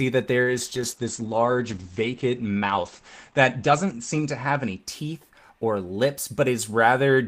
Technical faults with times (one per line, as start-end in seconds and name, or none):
0.44-6.05 call bitrate drop